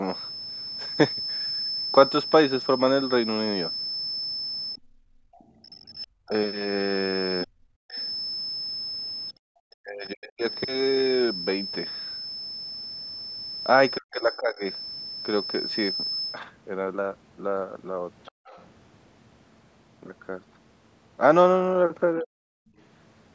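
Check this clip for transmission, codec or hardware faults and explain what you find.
The faults here all come from echo cancellation on a speakerphone-style call, not from the codec or transmission.

Other side's voice leaking through, at 4.76–6.27 s, 7.91–8.09 s, 10.51–10.55 s and 18.25–18.67 s. The echo canceller likely failed to strip the loudspeaker's playback from the microphone. A faint second voice slips in, roughly 25 to 35 dB below the talker.

Speech suppressed in double talk, at 4.78–10.44 s (about 3 s affected), 13.96–14.65 s and 22.21–22.47 s. With both sides talking at once, the canceller likely could not tell the talker from the echo and turned everything down. The talker's voice drops by as much as around 40 dB in those stretches.

Background gated by the echo canceller, at 18.32–18.45 s. While the loudspeaker was active, the canceller clamped the microphone hard. The room sound dips by about 39 dB for roughly 150 ms, then comes back once the canceller releases.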